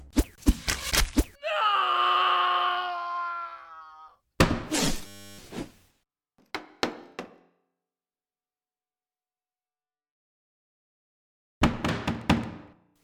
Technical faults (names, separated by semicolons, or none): system hang loop